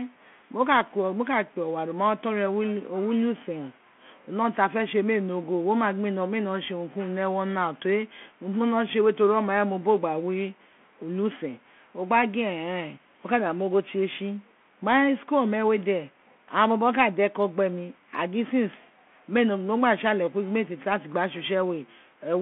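From start to finish the speech passes through a Bluetooth CVSD headset codec. The band runs only from about 150 Hz to 3.4 kHz, and the one-bit delta coding that fits a 64 kbps link adds plainly audible damage: a granular hiss under the speech, scratchy s sounds, and distortion where loud, bright sounds outrun the adapting step size. A plain narrowband phone line would be band-limited but clean. This grainy, slope-overloaded texture is what marks CVSD.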